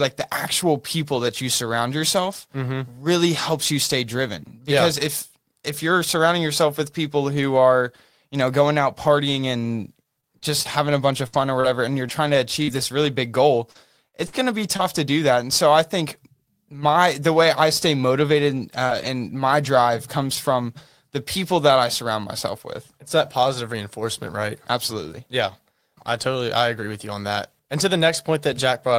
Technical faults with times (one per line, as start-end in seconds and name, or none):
9.63-14.81 scattered short gaps
18.57-19.07 lost packet rebuilt from error correction
18.87-18.91 short concealed packet loss
19.65-19.95 lost packet rebuilt from error correction
20.35 lost packet rebuilt from error correction